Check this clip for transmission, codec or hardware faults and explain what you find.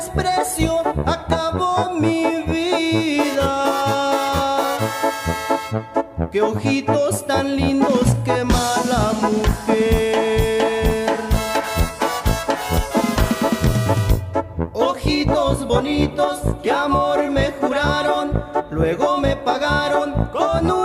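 No transmission, codec or hardware faults.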